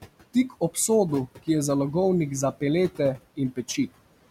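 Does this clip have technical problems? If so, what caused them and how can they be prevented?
Yes. Noise suppressor artifacts run throughout the speech: the suppressor pulls room noise down about 18 dB between phrases, so the noise sinks between words and rises under them. Prevent it by lowering the suppression depth or reducing the room noise, which sits about 17 dB below the speech, at the source.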